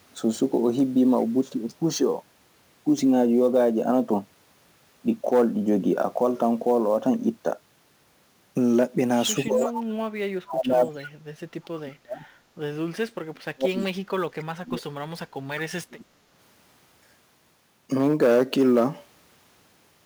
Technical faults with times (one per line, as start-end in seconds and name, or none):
0.00-20.06 sample clock jitter
9.35-9.75 speech suppressed in double talk
9.65-9.72 echo leak
10.44-11.01 speech suppressed in double talk
10.99-11.07 echo leak
11.76-12.25 speech suppressed in double talk
12.93-14.87 speech suppressed in double talk
14.39-14.45 echo leak
15.87-16.07 speech suppressed in double talk